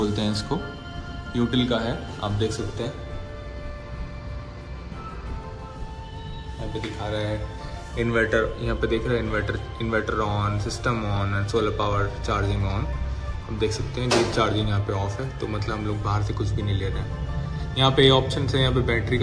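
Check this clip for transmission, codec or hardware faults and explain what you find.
Nothing wrong turns up anywhere in this audio.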